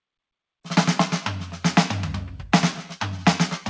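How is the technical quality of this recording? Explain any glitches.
No glitches: the music arrives over a call link with nothing above 8 kHz, consistent with G.722 wideband coding.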